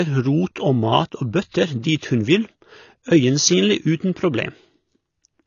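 From start to finish the speech has nothing above 6.9 kHz and sounds plainly dull and smeared, with a warbling, fizzy texture. The likely cause is AAC compression: the encoder dropped the top band and coarsely quantised what remained, consistent with AAC-LC at about 24 kbps.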